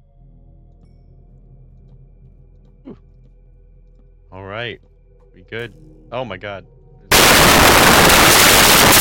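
At 7.12 s the audio turns into samples built from the wrong bytes, lasting to the end at 9.01 s. From that point each sample value is assembled incorrectly, whether from a one-byte offset, swapped byte order or a wrong alignment assumption, so the rapidly changing low-order bits end up dominating each value. The result is broadband noise in place of the sound. A spectrogram shows energy abruptly smeared across the whole frequency range, and the waveform becomes dense, noise-like and unrelated to the preceding envelope.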